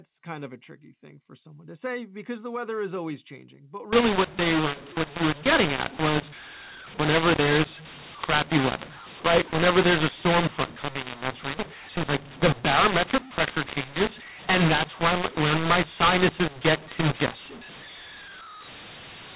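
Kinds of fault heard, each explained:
mu-law and A-law mixed up: From 3.93 s to the end, speech coded with A-law is decoded as mu-law. Sample levels map to the wrong values. Loudness comes out scrambled and the speech turns harsh and distorted. The quietest samples rise, filling pauses with noise.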